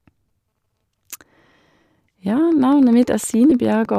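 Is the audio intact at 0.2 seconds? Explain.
Yes, the speech at 0.2 s is intact, with no fault at that moment.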